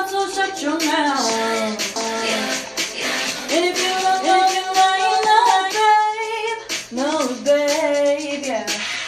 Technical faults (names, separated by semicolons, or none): doubled audio track